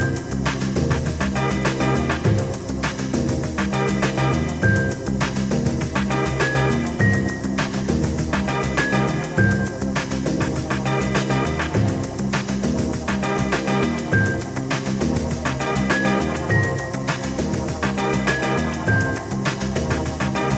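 Nothing stood out on listening; the sound sits within the roughly 8 kHz band expected of a call carried over an Opus link.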